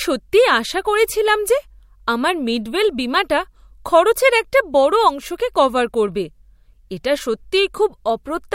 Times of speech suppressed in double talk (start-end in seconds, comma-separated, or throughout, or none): none